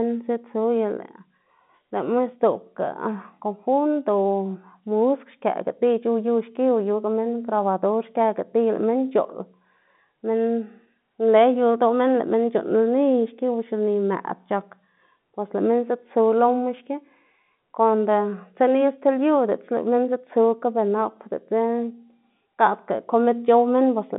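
Nothing's wrong with this speech recording; it's simply telephone-coded audio, with the usual narrow phone band topping out around 3.8 kHz and no problems to point to anywhere along the way.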